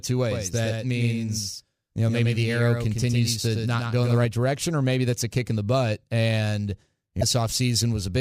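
A speech clip in which a second, delayed copy of the signal was likely captured by a slower path or held out of step in an edit, a doubled audio track. From 0.32 to 4.26 s the same speech repeats roughly a tenth of a second behind, around 5 dB quieter, full-band and dry, beginning and ending abruptly. Later, damaged data in a compressed stream left the decoder misreading frames and hunting for the next header, so a brief glitch breaks the sound between 7.19 and 7.23 s.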